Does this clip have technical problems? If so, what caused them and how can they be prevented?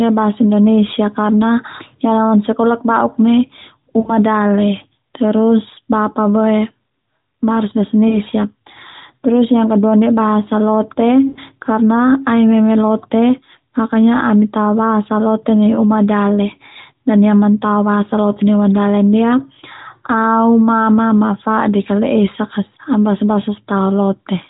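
Yes. At 4.00–4.13 s, 8.08–8.17 s and 11.28–11.39 s the speech briefly smears into a drawn-out, fading buzz before recovering rough for a moment. These are lost AMR speech frames: radio errors corrupted frames, so the decoder repeated the last good pitch and vocal-tract settings at falling gain, with gaps that fit roughly three, two and four 20 ms frames. Stronger channel coding and better radio coverage would prevent it.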